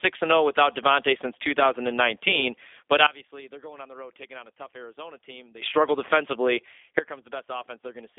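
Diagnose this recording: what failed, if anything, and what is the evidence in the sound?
The codec stage is at fault: the call went through a G.729 codec (G.729A at 8 kbit/s), which rebuilds each 10 ms frame from a vocal tract model, a pitch predictor and a few fixed pulses instead of sending the waveform. The speech is band-limited to a telephone line of roughly 300 Hz to 3.6 kHz, with nothing above 3.7 kHz, and the codec damage is plainly audible throughout as a rough, slightly synthetic texture.

The second fault is a sudden gain jump, twice, and its likely cause is a digital gain setting or bit shift applied from one sample to the next with no ramp. At 3.07 s the level drops by about 20 dB and stays down until 5.62 s, where it returns just before "struggle defensively". Straight after those words, at 6.99 s, it drops again by about 14 dB and stays low to the end. Speech and background fall together at each step.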